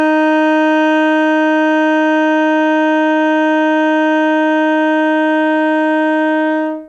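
No technical faults are audible.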